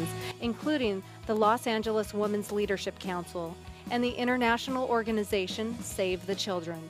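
At 0.31 s the audio suffers a sudden gain jump: the level drops by about 10 dB between one sample and the next and stays down through to the end. The sound and its background noise fall together, which points to a digital gain change rather than anything acoustic, likely a setting or bit shift applied without a ramp. On a waveform the envelope steps abruptly to roughly a third of its height; a spectrogram shows every frequency band dimming at the same vertical line.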